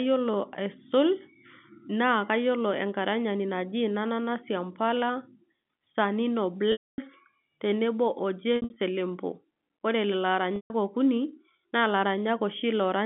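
At 6.72 s, packet loss with pitch repetition begins and lasts until 6.98 s. About 260 ms of audio is missing. The receiver repeats the last pitch period, fades it out, and leaves silence. The sound then returns with a brief cross-fade. From 8.56 to 8.76 s, 140 ms drops out in scattered bits, the longest being 60 ms, which gives a held, buzzy quality. At 10.56 s, a solid 140 ms gap fades to silence again. The gap lengths fit 20 ms packets, carried over G.711 telephone coding.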